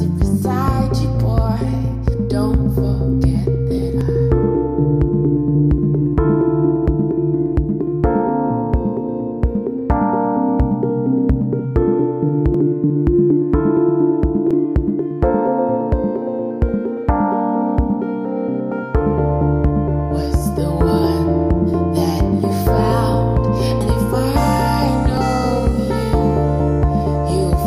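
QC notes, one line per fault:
4.01, 12.54, 14.51, 23.81 and 25.17 s: dropped buffer (overrun). Each is a jump where the sound lurches forward without any gap of silence. About a tenth of a second goes missing at 4.01, 12.54 and 25.17 s, and about 0.15 s at 14.51 and 23.81 s. The likely cause is the program failing to collect its samples before the hardware overwrote them, so each chunk is lost and the surrounding audio is spliced edge to edge.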